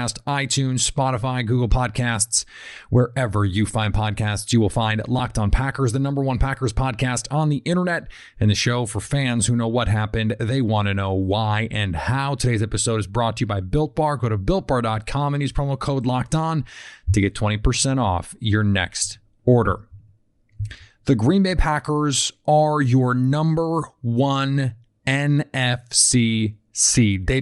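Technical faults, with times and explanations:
throughout, Bluetooth LC3 compression: likely LC3 coding at a rate that fits about 48 kbps, swapping upper-band detail for filled noise, so the speech has a breathy, grainy edge.
5.19 s and 19.66 s, lost LE Audio frames: one frame went missing each time, fitting 10 ms frames, and the decoder reused the last spectrum with random signs.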